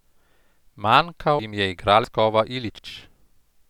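At 1.39 s the speech jumps forward, with no gap or silence, as if roughly a fifth of a second had been cut out and the edges butted together. The same thing happens at 2.04 s, again losing about a fifth of a second, and at 2.79 s with a shorter skip of around a tenth. These are most likely dropped buffers (overrun): the capture side didn't collect its samples in time, so the hardware overwrote them.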